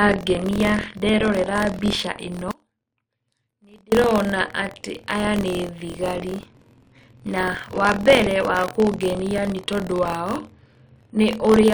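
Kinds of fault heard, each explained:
Buffer tearing: The writer and the reader of the playback ring buffer have drifted, so they cross inside every period. A small slice of each buffer, roughly 5 percent, plays audio from one lap back, about 50 ms old, with hard joins on either side. In this speech it comes through as a steady robotic buzz around 43.1 Hz that rides on the voice the whole way through, which fits a 1024-sample buffer.
Audio dropout to a faint residue: From 2.51 s to 3.92 s the speech abruptly vanishes for about 1.41 s, then snaps straight back in mid-flow. It's no natural pause or fade. The gap still holds a faint leak of sound, roughly 30 dB below the normal level, so the path downstream is still live. The likely cause is the wanted signal being lost upstream for that stretch while everything after the break kept running.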